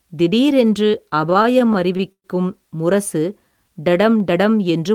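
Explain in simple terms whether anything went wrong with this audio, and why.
Between 1.09 and 2.26 s the speech suffers repeated stalls (stutter). Packets reached the receiver late or too slowly, so its jitter buffer kept running dry, 13 times in just over a second. Each time, the receiver stretched the last sound to cover the wait, the longest about 0.12 s, and faded it during the longer waits. Nothing is lost, but about a fifth of that stretch is filler, so the speech drags and stutters.

From 3.45 to 3.94 s there is a jitter buffer slow-down. The buffer was low or had just raised its target delay, so the receiver built up a reserve by repeating tiny pieces of the waveform, adding 79 ms in total. For that half second the speech plays at about 86% speed at the same pitch, so sounds come out drawn-out and slightly sluggish.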